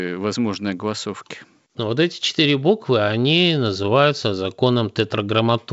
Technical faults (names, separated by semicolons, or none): none